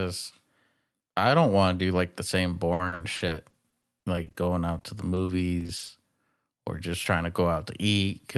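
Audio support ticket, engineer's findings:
Repeated packet loss (robotic sound), 2.73–4.49 s, starting just after "do like the same": choppy stretch with pieces missing. Jitter buffer/concealment repeatedly extending the last sound across short holes, longest about 60 ms, roughly a quarter of the span patched.

Repeated packet loss again, 4.79–5.91 s: same choppy sound, holes up to 40 ms, about a fifth concealed. Differs from a single dropout because holes recur in quick succession. Top cut near 12 kHz, consistent with Opus around 40 kbps.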